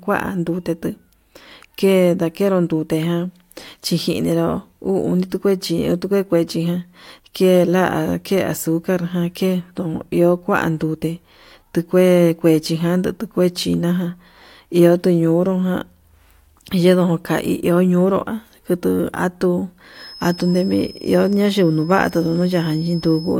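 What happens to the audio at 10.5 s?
Nothing goes wrong at 10.5 s; the speech carries on intact through that moment, with no dropout, click, distortion or other fault to be heard.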